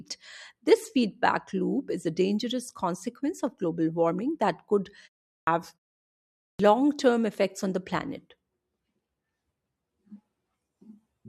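A speech clip with clipped starts after a pause: at 5.34 s, after "global warming that could", about 133 ms is lost, and at 6.47 s, before "term effects on the", about 124 ms, as the output device wakes after silence.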